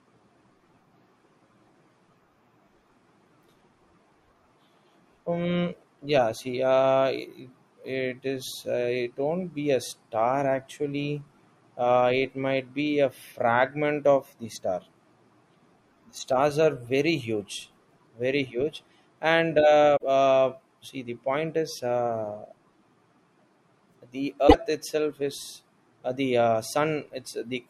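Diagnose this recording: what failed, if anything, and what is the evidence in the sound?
Codec stage: at 19.96 to 20.03 s and 24.47 to 24.54 s the speech skips ahead through a 74 ms glitch, about three 24 ms frames. It shows as a waveform discontinuity. Likely a broken MP3 bit reservoir: after cut frames, decoding borrowed bits from another frame's bytes.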